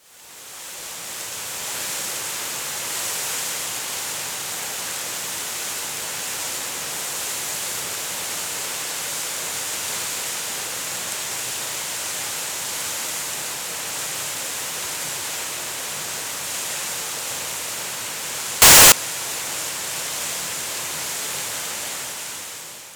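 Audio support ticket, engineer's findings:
18.62–18.92 s: sudden very loud, harsh distortion, quiet parts as loud as the rest. Likely signed/unsigned mixed up in 8-bit sample read, top bit flipped. Waveform: rail-to-rail square jumps at each zero crossing. Spectrogram: broadband smear.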